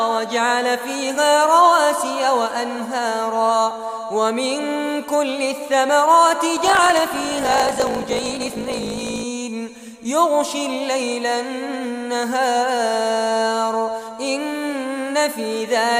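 From 6.55 to 9.24 s the audio shows a block size mismatch (truncated): the tail of each block is dropped, giving a 54.4 Hz buzz and 1.16x faster playback, which fits 1024-sample writes. Unlike a sample-rate error, timbre stays normal.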